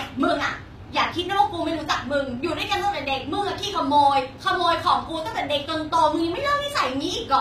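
The speech was likely squeezed through HE-AAC compression at a very low rate, around 24 kbps, with the treble rebuilt by copying lower bands upward. Throughout, the top end sounds bright but synthetic, with gritty, lispy s sounds and plainly audible codec damage.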